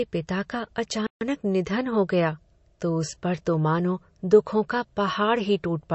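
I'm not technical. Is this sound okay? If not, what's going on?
No, there are two problems, one through the whole clip and one brief gap.

Throughout, the speech sounds thin and watery, and anything above about 8 kHz is simply gone, so crisp sounds like s lose their sparkle. That's the signature of MP3 compression, most likely squeezed too hard: the encoder saved space by dropping the treble and the quieter details, and what's left has that swirly, underwater edge.

Near the start, from about 1.07 to 1.21 seconds, the speech just stops for roughly a seventh of a second and then carries on. That's a playback stall, likely the player running out of data for a moment and falling silent until it caught up.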